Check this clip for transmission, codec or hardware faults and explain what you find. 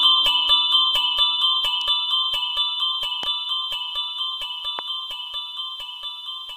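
Two loud pops are present, at 3.23 to 3.25 s and 4.79 to 4.81 s. They are brief sharp clicks, roughly 15 dB and 10 dB above the sound, which continues underneath. The likely cause is voltage spikes from switching or static.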